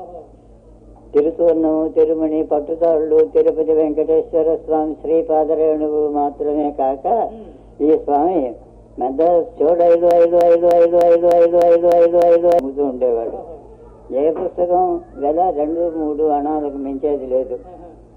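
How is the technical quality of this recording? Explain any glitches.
The recording has one clear glitch, a broken-record loop from 10.11 s to 12.59 s. A fragment of about 0.30 s repeats exactly, back to back, eight times, so the audio seems to stick and stutter in place while whatever should have played there is lost. The likely cause is a player, encoder or stream that stalled and kept re-sending the last piece it held. On a waveform or spectrogram this appears as an identical block tiled end to end at a steady 0.30 s spacing.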